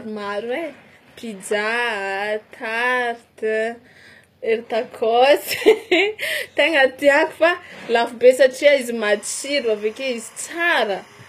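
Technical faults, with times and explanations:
Throughout, HE-AAC compression: this is likely HE-AAC, with nothing above 14.9 kHz and plainly audible damage that fits a low bitrate around 24 kbps. The treble is rebuilt from copied lower bands, so the s sounds come out gritty and metallic instead of clean.
9.03 to 11.29 s, timecode bleed: a faint chirping warble sits well below the speech and runs to the end. It flips between tones near 1 kHz and 2 kHz at a 25 frames-per-second rate, the way leaked linear timecode from a neighbouring track or cable sounds.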